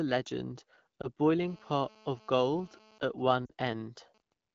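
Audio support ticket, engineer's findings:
Brief dip or warble at 1.02–1.07 s, about 20 ms, consistent with one lost AMR speech frame. Radio errors failed the frame checksum, and the decoder bridged the gap by reusing the last good pitch and vocal tract settings at reduced gain.

Longer dropout falling to near silence at 3.45–3.52 s, about 40 ms, pointing to two consecutive lost frames. Concealment decays quickly on the AMR-WB (HD Voice) path at 12.65 kbit/s, and the sound returns briefly weak or rough.

Hard, raspy buzz from 1.39 to 2.99 s, steady, about 30 dB below the signal, at 217 Hz with dense harmonics unrelated to the speech. GSM phone buzz: a nearby 2G handset in a call pulses its transmitter, and the audio circuit rectifies it.

Even ticks with a longer 217 Hz buzz twice a second from 3.0 to 4.32 s, roughly 35 dB down. GSM signalling bursts: a nearby handset, in a call while its user is silent, sends only sparse burst groups, which the audio circuit rectifies.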